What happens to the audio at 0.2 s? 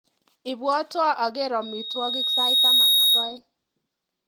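Nothing goes wrong at 0.2 s; the speech there comes through intact, carried normally by the Opus voice compression.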